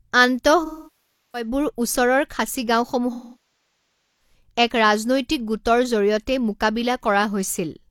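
AAC frame loss with concealment hits at 0.65–1.48 s and again at 3.12–4.34 s. The decoder rebuilds the missing frames from the last good spectrum, giving a smeared, noisy stretch. On a spectrogram this appears as frozen, blurred bands replacing normal speech detail.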